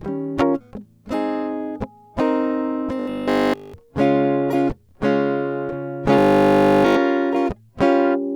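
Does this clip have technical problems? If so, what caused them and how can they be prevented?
Yes. Robotic sound from repeated short buffers appears from 3.00 to 3.74 s and again from 6.19 to 6.97 s, where the music collapses into a stiff, metallic buzz at 50 Hz. The likely cause is audio arriving too seldom, so playback fills the gaps by looping the last 20 ms block over and over, with almost none of the real signal getting through. That loop imposes its own 50 Hz pitch. Prevention: enlarge the jitter or playback buffer and keep the audio thread from being starved.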